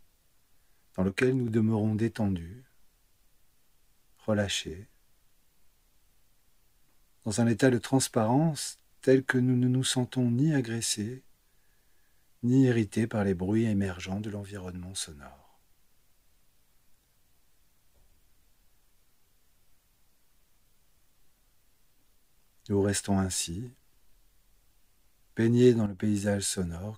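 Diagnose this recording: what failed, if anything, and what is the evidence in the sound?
Sudden gain jumps at 1.08–1.48 s (about -4 dB) and 25.86–25.99 s (about -9 dB). The waveform envelope and noise floor step down together, likely from an unramped digital gain change.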